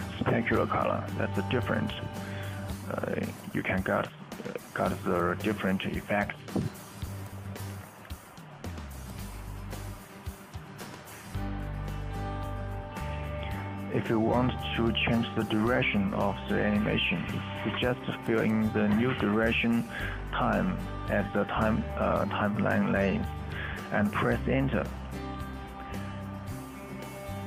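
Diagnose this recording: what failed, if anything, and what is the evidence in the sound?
CD scratch ticks at the playback stage: four brief ticks between 0.32 and 1.07 s and four more between 25.29 and 26.03 s, the longest about 0.7 ms in the first run and 2 ms in the second. Their steady spacing, about four to five a second, matches disc rotation, where buffer underrun clicks fall irregularly.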